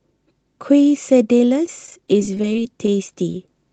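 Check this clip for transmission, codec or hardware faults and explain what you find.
Two kinds of transmission fault are present, both losses on the call's network path rather than codec or hardware failures. The audio travelled over an Opus call path whose top end stops around 8 kHz, and that path itself is working as expected.

Repeated packet loss (robotic sound) runs from 1.66 to 2.92 s. Packets kept failing to arrive in time, producing twelve separate holes across that stretch, none longer than about 14 ms. About 90 ms of real audio went missing in total. The receiver covered each hole by extending the preceding sound, synthesising roughly 112 ms of substitute audio, or about 9% of the span. Because the patches recur in quick succession, the sound turns choppy, with small pieces dropped throughout.

Short concealed packet loss occurs twice, at 3.32 to 3.35 s and at 3.47 s. Each time about 10 ms of audio failed to reach the decoder. 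The decoder bridged the first gap with about 11 ms of continued sound and the second with about 7 ms, then faded back into the received signal. Each is a brief, isolated smear or wobble, and a short sound landing in either gap can disappear.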